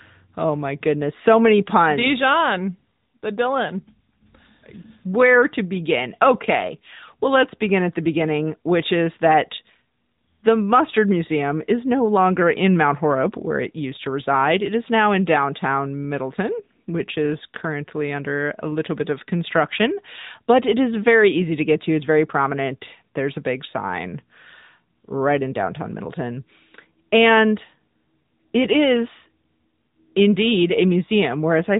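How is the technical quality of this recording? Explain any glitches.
The speech has passed through an AMR narrowband mobile codec for its whole length, and the damage is plainly audible. The encoder samples at 8 kHz and rebuilds each 20 ms frame from a vocal-tract filter excited by a handful of pulses, so nothing above about 3.8 kHz survives. The mid-range coding density points to roughly 10 kbps. The result is a thin, telephone-band sound with a buzzy, somewhat synthetic edge.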